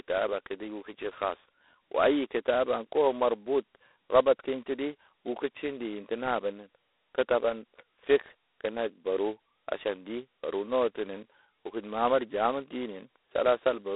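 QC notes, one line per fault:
Throughout, G.726 ADPCM: the speech is narrow and boxy, with a harsh, rasping hiss that rises and falls with its loudness, and nothing above 3.9 kHz. The channel passes roughly 300 Hz to 3.7 kHz. The codec sends only a small coded difference from a running prediction of each sample, and at such a coarse step the quantisation error rides on the speech itself. The heavy grit fits the 16 kbit/s rate, two bits a sample.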